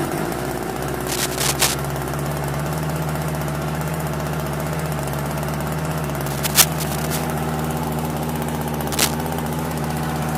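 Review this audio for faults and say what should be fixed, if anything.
Cable scratch noise appears three times: 1.08 to 1.75 s, 6.26 to 7.24 s, and 8.92 to 9.16 s. Each burst is a dense, uneven scratching or rustling about as loud as the sound itself. The likely cause is a worn cable, connector or control being moved. Its contact resistance jumps around rapidly, and that injects noise into the signal. Replace or clean the suspect cable and connectors, and keep them still while recording.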